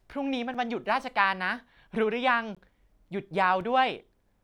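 Three brief dropouts cut into the speech: a tick at 0.54 s lasting 5.8 ms, a short hole at 2.55 s lasting 17.4 ms, and a tick at 3.61 s lasting 2.5 ms. Each is a block of digital silence. The signal drops straight to silence and returns with no fade. The first gap's length fits a 256-sample buffer that was not filled in time.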